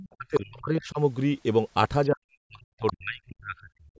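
A 4-second speech clip from a call, with the spectrogram empty above 8 kHz. It shows other side's voice leaking through at 0.00–0.14 s, 0.35–0.39 s and 2.87–2.93 s. These are second-voice fragments about 10 to 20 dB under the talker, visible as weak harmonic traces, and likely residual loudspeaker echo the canceller missed. Speech is also suppressed in double talk from 0.14 to 0.99 s and from 2.09 to 3.96 s. On the waveform the talker's envelope collapses in chunks, totalling under a second and about a second and a half, with dips of about 35 and 40 dB that show as dark gaps in the spectrogram. This is likely the echo canceller muting both voices while they overlapped.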